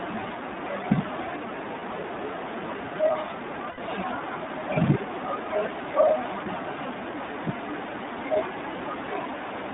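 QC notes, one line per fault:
Throughout: iLBC codec. The speech is confined to roughly 200 Hz to 3.7 kHz and has a plainly audible rough, slightly synthetic edge, which fits iLBC's 15.2 kbps mode. Each 20 ms frame's excitation is coded on its own, so detail is coarsely approximated.
1.80–1.83 s, 3.70–3.79 s, 6.44–6.47 s: lost iLBC frames. The decoder fills each gap by repeating the last pitch cycle blended with noise, heard as a brief held, buzzy vowel. The 80 ms gap at 3.70 s points to four lost frames. Recovery is immediate because frames stand alone.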